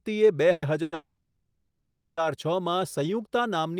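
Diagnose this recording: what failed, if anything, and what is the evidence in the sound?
The speech stalls at 0.51 to 0.64 s, 0.82 to 0.94 s and 0.94 to 2.19 s. Each stall is a fading buzz of the last sound, with the longest sinking into silence before speech resumes intact. This is a call audio freeze, likely late network packets draining the jitter buffer, which inserts gaps without losing content.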